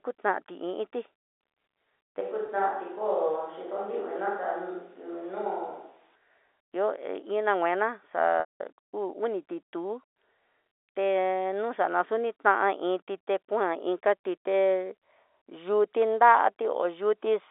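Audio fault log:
2.21–6.16 s, switch to a distant microphone: The speech suddenly turns roomy and hollow, with thinner low end and background noise rising to roughly 35 dB below the speech, while the overall level stays about the same. At 6.16 s it snaps back to the close, dry sound. The likely cause is that the close microphone dropped out and a more distant pickup carried the signal, hearing more of the room and less direct sound.
2.46–2.48 s and 8.40–8.60 s, packet loss with pitch repetition: The first event is a brief held, buzzy blip of about 20 ms inside the hollow stretch, which fits a single lost packet. The second begins just after "nguina xa" and lasts 200 ms, consistent with about ten lost packets. There the repeated pitch period drones briefly, fades to silence, and the speech returns through a short cross-fade. In both, the receiver bridged the missing audio by looping the last pitch cycle.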